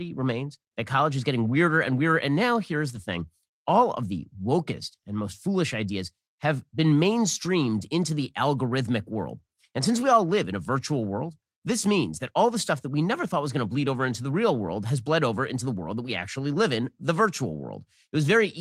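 Speech with two brief moments of lost packet rebuilt from error correction, at 2.95 s (after "now here's", before "thing all of the") and at 11.01 s (after "all live in a", before "world this means that"). Each lasts about 20 ms, which fits a single lost packet replaced by the low-bitrate copy carried in the next one. There's no dropout, just a momentary rough, noisier texture. The waveform stays continuous, while a spectrogram shows a narrow slice of smeared, grainier energy.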